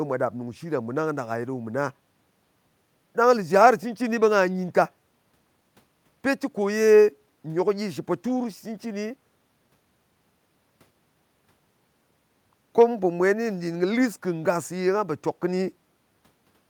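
A recording of speech with no technical fault to point to. Nothing in it needs a time or a cause.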